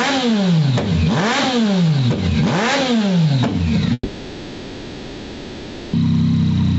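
The audio is band-limited to 8 kHz by the call path, and throughout it the level of quieter passages and the background rises and then ducks by roughly 5 dB under each loud sound, likely gain pumping from a fast limiter working against excessive input gain. On a waveform this shows as a compressed envelope with little contrast between loud and soft parts, and the noise floor swells and sinks between events. From 3.93 to 5.95 s there is a long network dropout, likely from audio that never arrived. For about 2 s the last sound is stretched into a fading synthetic buzz or hiss, followed by a gap of about 30 ms of silence before the audio resumes further on without the lost section. A spectrogram shows smeared, repetitive bands that decay over that span and a thin blank strip just before normal content returns.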